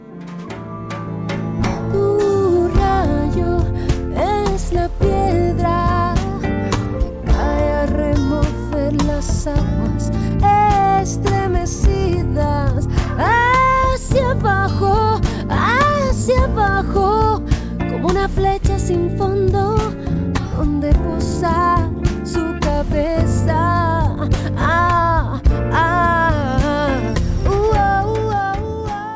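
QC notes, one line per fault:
No faults to note; the sound comes through the call path as expected, with nothing above 8 kHz.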